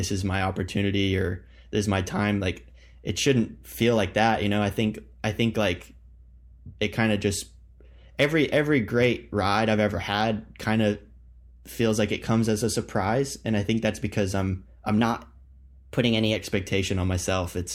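From 14.98 to 16.36 s, a wrong sample rate: playback runs without conversion, fitting 44.1 kHz audio played at 48 kHz, so speech speeds up 1.09 times and rises about 1.5 semitones.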